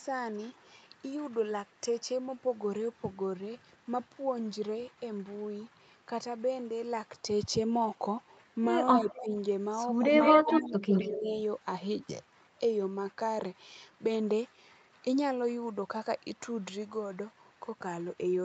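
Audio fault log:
9.05–9.34 s and 10.43–11.32 s, speech suppressed in double talk: the voice dips by about 10 dB in the first stretch, then by about 20 dB across roughly half a second, likely because the echo canceller couldn't separate this talker from overlapping far-end sound and ducked everything.
9.1–9.28 s, 10.1–10.75 s and 10.93–11.17 s, echo leak: a delayed copy of the voice trails behind, about 224 ms late at first, then 171 ms. It's faint at about 20 dB down, except 10.1–10.75 s where it's only about 5 dB below. The likely cause is loudspeaker pickup the canceller missed.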